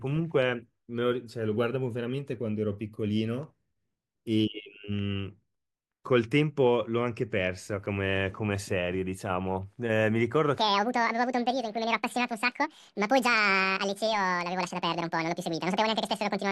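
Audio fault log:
10.58–16.52 s: section at the wrong speed. The final stretch was likely played out against the wrong clock, running 1.84 times faster than recorded, so the speech turns hurried and high, jumping up roughly ten semitones, with tempo and pitch rising together right through to the end.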